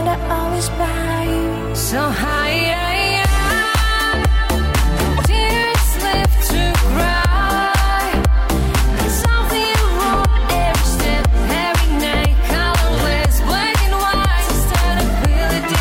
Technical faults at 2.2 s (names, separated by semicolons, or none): corrupt frame decoded